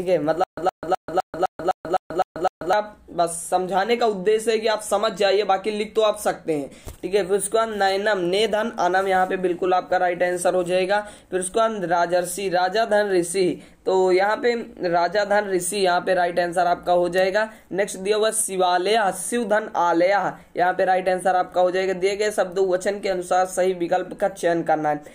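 From 0.44 s to 2.73 s the audio breaks into a stutter with silent gaps. A fragment about 117 ms long plays, then drops to dead digital silence for about 138 ms. The cycle repeats every 255 ms, nine times in a row, at a steady pace. The sound that should fill that stretch never arrives. The likely cause is a stalled player or stream that replayed its last buffered fragment at each retry and then ran dry.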